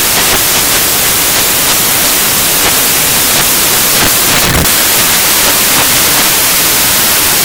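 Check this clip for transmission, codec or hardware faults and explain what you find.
One fault runs through the whole clip: samples built from the wrong bytes. From start to finish the reader assembles each sample's bytes wrongly, with swapped order or an offset, so the rapidly changing low bits dominate. The result is loud, harsh broadband noise, close to white on loud sounds. That dependence on the original signal separates it from independent added hiss.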